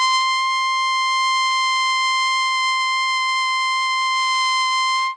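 WMA compression damage runs through the whole piece of music and is plainly audible. Everything above 10.1 kHz is gone, and the remaining sound rings and smears with a breathing hiss, likely from a transform codec starved at a low bitrate near 32 kbps.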